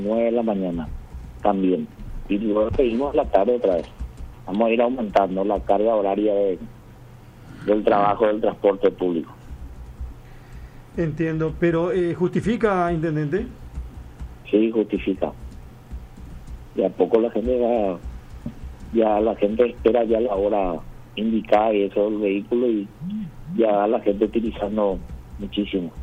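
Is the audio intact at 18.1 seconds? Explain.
Yes, the audio at 18.1 seconds is intact, with no dropout, click, distortion or other fault at that moment.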